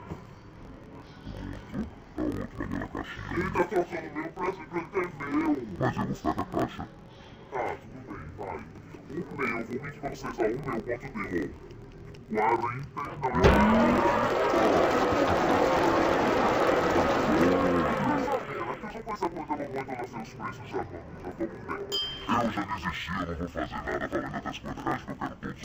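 Throughout the clip, the sound plays an octave low yet keeps its normal pace. It has a doubled, choppy texture pulsing at about 43 Hz. This is interleaved audio read as planar. Each 23.22 ms block, which fits a 1024-sample block, has its alternating left and right samples split into halves that each play at half speed. A sample-rate mismatch would drag the tempo down with the pitch. Here only the pitch falls, with the steady block-rate chop.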